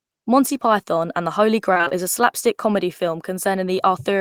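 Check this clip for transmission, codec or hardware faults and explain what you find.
One transmission fault is audible. From 1.73 to 1.92 s, before "is slapstick comedy", repeated packet loss leaves gaps patched by repeating earlier sound. The speech turns choppy and robotic.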